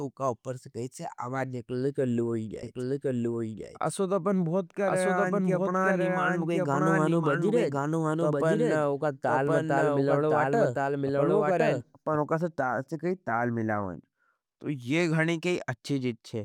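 From 2.63 s to 12.17 s the speech carries a doubled audio track: a second, full-band copy trails the original by about a second, at roughly the same level, with no decay or room colour. It likely comes from the signal being captured again through a slower path. The copy cuts in and out abruptly at both ends. On a spectrogram every syllable pattern reappears intact about a second later, and the waveform shows overlapping, equally tall envelopes across that span.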